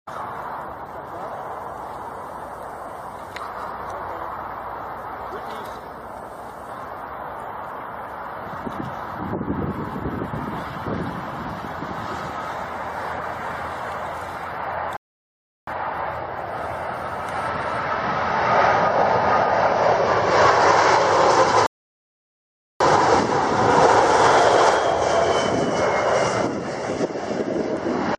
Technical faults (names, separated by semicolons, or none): rebuffering stall